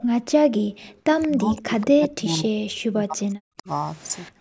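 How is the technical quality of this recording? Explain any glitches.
The recording has clear faults from call processing, affecting the speech throughout and in several bursts.

Throughout, there is channel delay (comb filtering): one channel runs about 1 ms late, and summing to mono cuts notches starting around 500 Hz, so the speech sounds hollow and phasey.

From 0.03 to 0.15 s and from 0.52 to 0.98 s, the background is gated by the echo canceller: it clamps the microphone, so the room sound drops by about 15 dB and then about 40 dB.

At 1.22 to 1.28 s, 1.58 to 1.62 s and 4.25 to 4.29 s, there is echo leak, likely from a loudspeaker echo slipping past cancellation. Brief copies arrive 180 ms late, roughly 20 to 30 dB below the speech.

From 1.26 to 3.68 s and from 4.32 s to the end, the speech is suppressed in double talk, likely because the canceller ducked overlapping talk. The speech dips by as much as about 40 dB.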